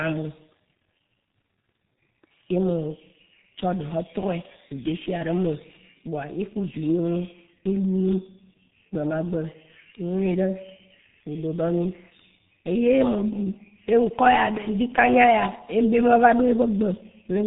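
From start to finish the speech carries heavy G.723.1 codec damage: a hard ceiling near 3.8 kHz leaves it muffled, and slow 30 ms frame updates blur consonants into hoarseness, which fits a rate near 6 kbit/s. A spectrogram shows an empty band above 3.8 kHz and smeared, blocky formants.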